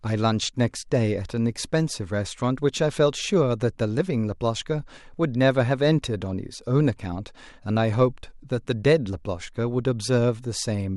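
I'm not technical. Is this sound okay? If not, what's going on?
Yes, this recording is fine. Nothing in it points to a technical problem.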